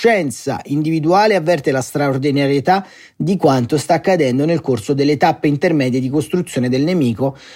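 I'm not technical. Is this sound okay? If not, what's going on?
Yes, this recording sounds fine, with nothing going wrong that you'd need to worry about.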